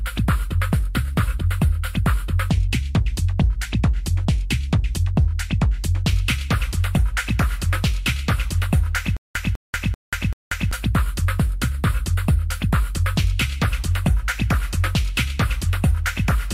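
From 9.17 s to 10.71 s the audio catches and repeats itself: a short fragment of about 200 ms plays, then drops into dead digital silence for about 187 ms, and the same fragment returns, four times in all at a steady pace of one every 0.39 s. This stutter with silent gaps likely comes from the player or stream stalling, replaying its last buffered piece on each retry before running dry, so the audio due in that stretch never arrives.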